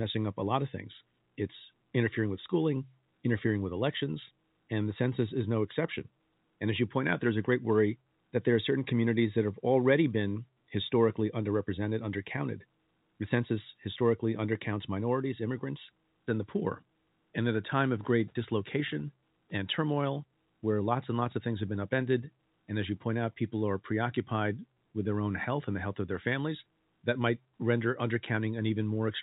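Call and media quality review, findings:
Nothing to flag on this speech clip; it's a normal telephone-band call path, with the G.711 A-law coding at 64 kbps capping the audio at 4 kHz as that format always does.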